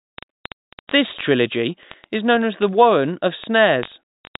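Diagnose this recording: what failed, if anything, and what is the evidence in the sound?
Word clock ticks on the digital link. Ticks repeat roughly every 20 ms from 0.10 s onward. An unlocked receiver clock, roughly 0.1 percent off, slips one sample each time.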